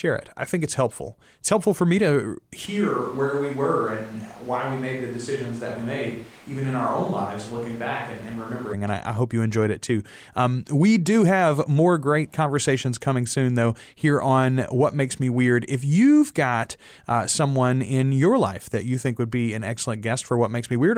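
Right after "helpful for me to", at 2.67 s, the speech turns suddenly roomy and hollow with less bass, drops about 5 dB, and carries room noise roughly 25 dB below it until 8.72 s. This is likely a switch to a distant microphone.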